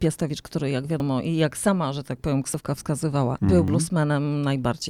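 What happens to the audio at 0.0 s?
Nothing goes wrong at 0.0 s; the audio is intact at that moment.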